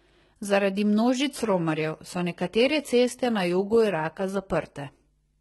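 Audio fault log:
throughout HE-AAC compression: the speech is gritty, with s sounds turning metallic and lispy and nothing above 11.8 kHz. This is likely heavy HE-AAC coding near 16 kbps, whose treble is rebuilt from copied lower bands that fail to match.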